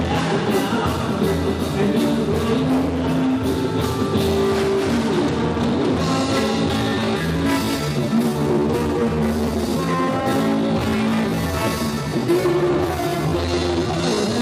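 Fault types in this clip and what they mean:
time-stretched section: likely a stretch to fill a set length, slowing the audio to 0.704 times speed from 6.73 s to the end, leaving it dragging at unchanged pitch.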